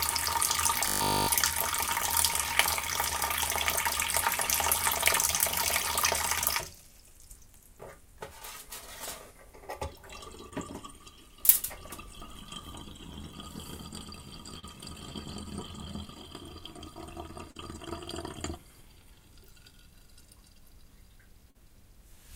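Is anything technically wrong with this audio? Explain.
Yes, two kinds of fault are audible.

From 0.88 to 1.28 s there is robotic sound from repeated short buffers. The audio takes on a rigid, metallic buzz at 50 Hz, which points to a single 20 ms stretch being looped while fresh audio arrived too slowly, so almost none of the original material in that window survives. The likely cause is a starved playback buffer. On a spectrogram this shows as evenly spaced horizontal harmonics of 50 Hz. The waveform shows one identical cycle tiled across the span.

Short concealed packet loss occurs four times, at 10.49 to 10.53 s, 14.59 to 14.65 s, 17.51 to 17.57 s and 21.51 to 21.57 s. Each gap runs about 20 to 40 ms. The receiver fills each hole by extending the preceding sound, then crossfades back into the real signal. Each one is heard as a brief smear or wobble. A spectrogram shows a short, blurred patch with frozen or noisy texture, and the waveform shows a slightly flattened, overly regular segment at each time.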